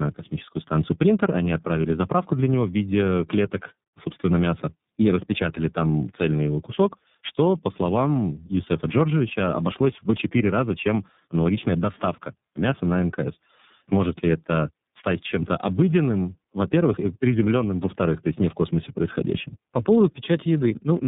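Throughout, tandem speech coding: the speech went through two low-rate speech codecs in series, likely AMR-NB then iLBC, the later recoding the earlier's damage, leaving rough, warbly, muffled audio cut off above 3.8 kHz.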